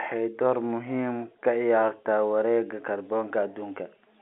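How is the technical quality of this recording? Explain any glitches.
Nothing glitchy turns up anywhere in this bit of speech; you just hear the narrow band of an ordinary landline call, which is how G.711 telephone coding is meant to sound.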